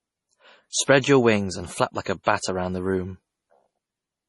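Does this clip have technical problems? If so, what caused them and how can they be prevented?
Yes. The speech has no content above 11.4 kHz and a watery, swirly texture with heavily smeared detail throughout, likely from MP3 compression at a low bitrate, with the sound pointing to about 32 kbps, where the encoder cuts treble and drops weak frequency lines. Encoding at a higher bitrate, or keeping a lossless copy, would prevent it.

Pre-echo appears at 0.70, 0.83, 1.01 and 2.23 s. Quantisation noise spread across each transform block leaks ahead of sharp attacks as a short hiss, lasting 26, 54, 26 and 32 ms respectively, softening each onset. A higher bitrate, or an encoder that switches to short blocks on attacks, would prevent it.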